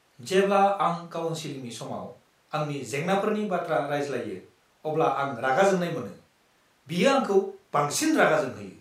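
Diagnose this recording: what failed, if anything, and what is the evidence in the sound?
Nothing failed here; listening across the whole speech recording, there's no point where anything along the chain breaks down or leaves a mark worth chasing.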